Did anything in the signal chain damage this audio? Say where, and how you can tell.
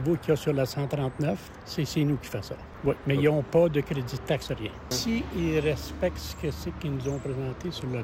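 No, nothing in the chain audibly damaged this audio.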